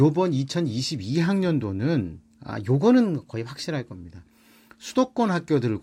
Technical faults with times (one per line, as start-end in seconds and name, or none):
2.51-3.95 drift correction step